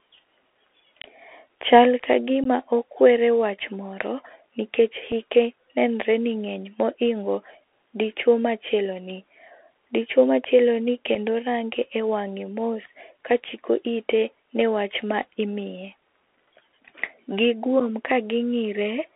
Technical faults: Bluetooth CVSD headset codec; unconcealed Bluetooth headset packet loss

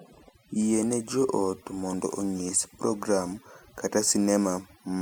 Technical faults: overdone noise removal

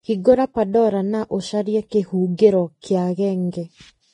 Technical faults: Vorbis compression; pre-echo

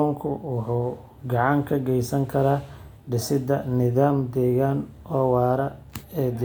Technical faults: none

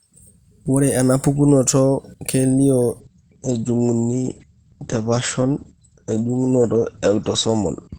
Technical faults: adaptive stream at a lower bitrate

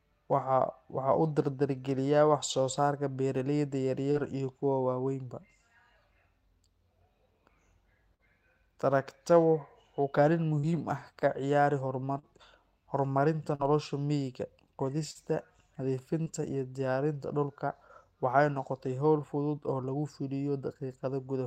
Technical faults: short concealed packet loss

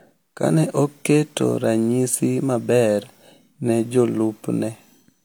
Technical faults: low-bitrate audio saved at a high bitrate

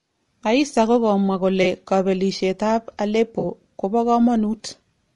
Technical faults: low-delay AAC compression; AAC frame loss with concealment

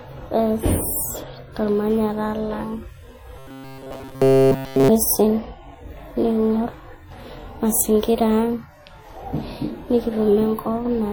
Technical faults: WMA compression; robotic sound from repeated short buffers

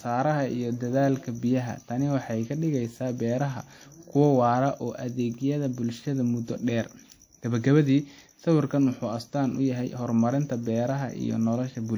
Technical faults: WMA compression

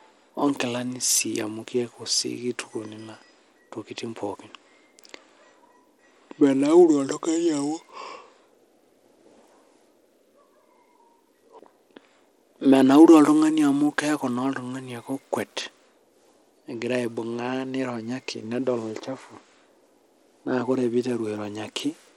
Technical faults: Bluetooth SBC compression

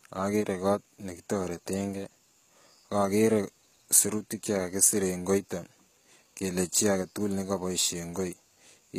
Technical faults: HE-AAC compression

